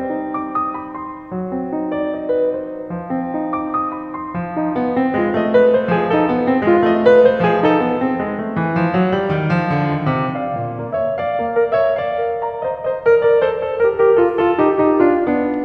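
No technical faults can be heard anywhere in the music.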